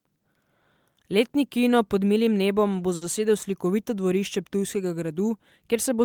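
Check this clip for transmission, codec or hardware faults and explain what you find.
There's one transmission fault here, a short stall from a late packet, between 2.95 and 3.03 s, just after "pod milim nebom bo". A packet showed up late and the jitter buffer ran dry, so the receiver held out the last bit of sound for about 60 ms until it arrived, then carried on from the same spot. Nothing's lost, but the speech from there on runs 60 ms later, and you hear that stretched sound as a slightly buzzy or dipped hold.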